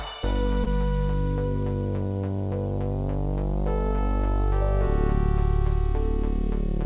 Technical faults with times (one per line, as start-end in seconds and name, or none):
0.64-0.68 short concealed packet loss